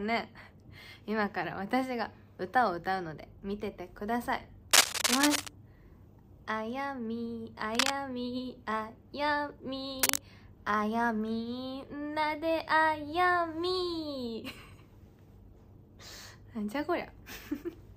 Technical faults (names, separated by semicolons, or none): cable scratch noise